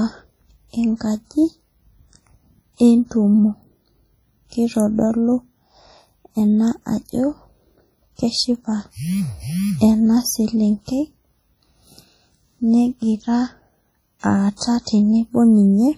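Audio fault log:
throughout WMA compression: likely a heavily squeezed transform encode, its noise smeared across long blocks, so speech rings and washes with hiss breathing along.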